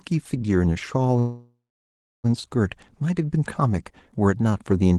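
Speech over a call path with Opus coding, audio limited to about 12 kHz, and a call audio freeze from 1.19 to 2.26 s. The sound smears, fades, then sits silent for about 0.68 s before resuming, likely from late packets draining the jitter buffer.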